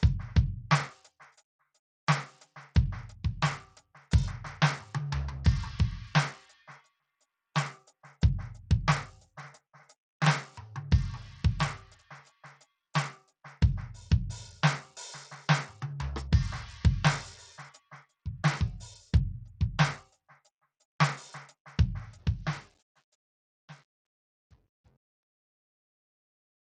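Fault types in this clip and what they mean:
Bluetooth SBC compression: Across the whole music clip the treble sounds thin and unsteady, flickering in and out, with a gritty, grainy layer and aliasing tones riding on top. The likely cause is the basic Bluetooth music codec working at around 80 kbps, which fits a small bit pool. Its fixed sub-bands get bits by a simple rule, so the weaker upper bands are starved and the rest are roughly quantised.
Sound cut by the noise suppressor: From 20.04 to 20.47 s the music briefly sinks, dipping by up to about 10 dB over roughly 150 ms in total before recovering. The noise suppressor judged that stretch to be background noise and pulled it down harder than the surrounding sound. Sustained and decaying parts lose level this way, while sharp onsets tend to pass through.
Truncation distortion on a fade: The closing fade-out, which reaches its end at 26.6 s, grows rough from 22.06 s onward. 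It is worst from 22.74 s to the end, where the quiet tail turns gritty. The fade was computed at only 9 bits and without dither, so as the level drops the waveform collapses into a few coarse square steps.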